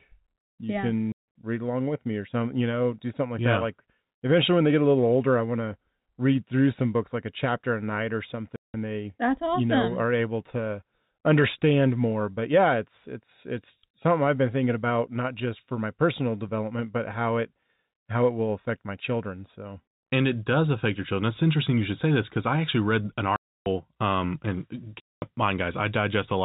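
Packet loss filled with silence cuts the speech at 1.12, 8.56, 23.36 and 25.01 s. Lost stretches of 160 to 300 ms became hard-edged holes. The lengths fit 20 ms packets.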